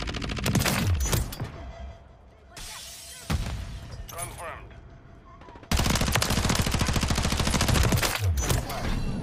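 From 5.93 to 7.89 s the audio turns dull and loses its top end, with a gritty, grainy noise riding underneath until it clears. This is a Bluetooth SBC bit pool drop: under link congestion the encoder starved the high sub-bands and quantised the rest coarsely, which fits a fall from a bit pool of 28 to 13, around 102 kbps.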